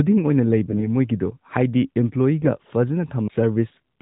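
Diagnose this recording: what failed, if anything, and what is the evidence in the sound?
The failure is at the network stage: AMR bit errors from roughly 0.69 to 0.89 s. Over that stretch the speech keeps its pitch and loudness but turns hoarse and scratchy, then clears. Seven 20 ms frames within that span were hit. Residual bit errors, at a rate of a few percent, corrupted the weakly protected pulse positions and fine gain and spectral values, while the core parameters passed their check. Packet loss would instead leave a gap or a smeared, muted repeat. Outside this burst, only the mild band-limiting of the AMR narrowband mobile codec is heard.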